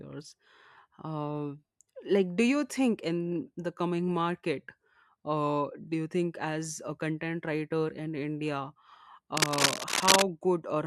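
From 9.37 to 10.25 s, cable scratch noise breaks over the speech: a dense, uneven crackling and rustling, somewhat louder than the voice itself. The likely cause is a worn cable, connector or control being moved, so its contact resistance jumps about rapidly. On a spectrogram it shows as irregular broadband vertical streaks across this span. The waveform carries clustered, jagged spikes riding on top of the speech.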